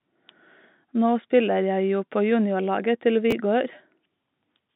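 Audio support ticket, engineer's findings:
Chunks out of order at 3.31 s. A single 5.33 ms chunk was written two chunks late, after the ones meant to follow it. Nothing dropped, but three hard joins give a brief jumbled moment in the speech. G.711 telephone band intact.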